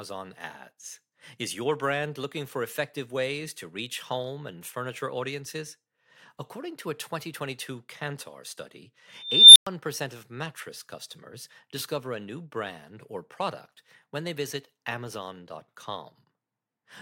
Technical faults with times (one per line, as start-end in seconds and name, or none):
9.16-9.67 unstable filter